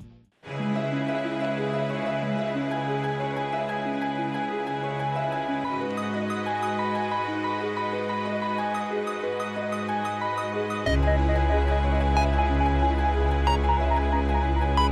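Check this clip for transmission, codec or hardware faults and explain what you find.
No transmission, codec or hardware faults.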